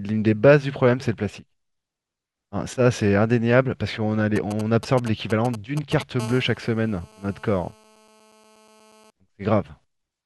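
GSM signalling bursts run from 4.36 to 6.03 s: a nearby 2G phone sends short groups of radio pulses repeating at about 217 Hz, which the audio circuit rectifies into a galloping dit-dit-dit of brief buzzes, at roughly 10 dB below the speech.

GSM phone buzz follows from 6.20 to 9.10 s, as the phone's transmission settles into continuous call bursts at about 217 Hz. Rectified by the audio circuit, this becomes a steady, hard, raspy buzz rich in harmonics, unrelated to the speech and about 24 dB below it.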